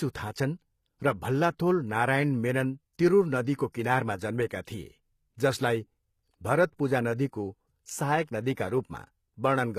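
From start to finish this speech has the sound of HE-AAC compression, likely a low-bitrate stream somewhere around 20 kbps. The damage is plainly audible: the upper range is rebuilt by copying lower bands upward rather than coded directly, so the treble doesn't line up with the real harmonics. The s sounds come out gritty and a bit lispy, and nothing is left above about 14.9 kHz.

At 3.72 to 3.74 s, right after "नारायण मेनन तिरुर नदीको", there's a short pre-echo. A sharp attack landed late in a transform block, so the codec's noise, sized for the loud part, also spread over the quiet moment before it. You get about 20 ms of hiss leading into the onset, and the attack itself sounds softened and smeared instead of crisp.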